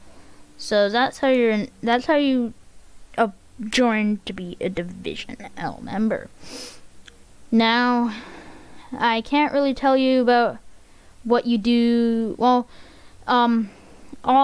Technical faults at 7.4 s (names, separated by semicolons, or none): none